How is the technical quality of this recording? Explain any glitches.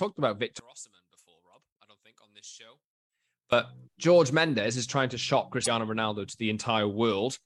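The recording has two clear faults: a long stretch where the sound collapses in level, and a brief glitch later on.

From 0.60 to 3.52 s, the whole signal, background included, drops by about 23 dB, leaving a faint residue. The likely cause is one channel inverted. When one stereo channel's polarity is flipped and the pair is folded to mono, everything common to both channels cancels, and only their differences remain. On a waveform this appears as a sudden narrowing of the envelope for those three seconds. A spectrogram shows the same span darkened across all frequencies.

From 5.63 to 5.67 s, right after "is trying to shock", there is damaged data in a compressed stream. Bytes in the encoded file were corrupted, so the decoder misread or discarded those frames and had to resync on the next valid frame header. The result is a short disruption of roughly 40 ms. On a spectrogram this shows as a narrow vertical band that breaks from the surrounding texture. 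On a waveform it is a brief irregular patch or gap.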